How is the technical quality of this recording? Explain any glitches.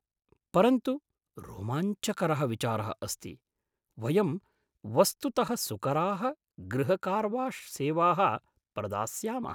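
Nothing stood out on listening; I heard no glitches in this recording.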